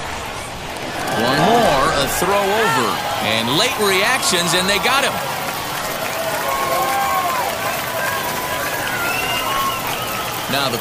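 At 1.37 s there is a brief blip, the mark of damaged data in a compressed stream. Bytes in the encoded stream were wrong at that point. The decoder misread those frames and lost sync. It resynchronised at the next valid frame header, leaving a short glitch.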